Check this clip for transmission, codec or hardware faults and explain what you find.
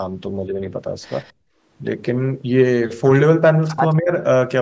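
Three faults turn up in this call recording of speech, all tied to echo cancellation on a speakerphone-style connection.

From 1.24 to 1.33 s there is an echo leak: a faint, delayed copy of the speech trailing about 204 ms behind the original and sitting roughly 35 dB below it. The likely cause is the far end's echo canceller failing to scrub all of the loudspeaker sound its microphone picked up. That fixed delay and the copy's dependence on the speech distinguish it from room reverberation, which would smear continuously rather than repeat at one lag.

Immediately after, from 1.33 to 1.62 s, comes background gated by the echo canceller. The room tone collapses by up to about 35 dB for roughly a third of a second and then returns. The canceller clamped the microphone while the loudspeaker was active and released it once playback stopped. The drop begins right where the echo scrap ends. 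That is what separates it from a network dropout, which would cut everything.

From 3.99 to 4.1 s there is speech suppressed in double talk: the talker's speech dips by up to about 20 dB for around a tenth of a second. This is likely the canceller mistaking overlapping talk for echo and attenuating both. The dip is partial and brief. Packet loss would instead leave a hard gap or concealment artefacts.

The call's microphone processing leaves nothing above 8 kHz, which is expected band-limiting.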